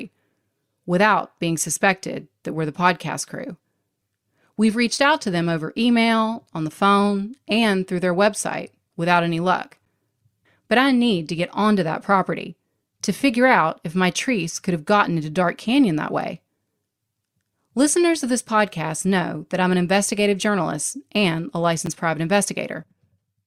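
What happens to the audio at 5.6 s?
Nothing goes wrong at 5.6 s; the speech carries straight through that moment with no dropout, click, distortion or other fault.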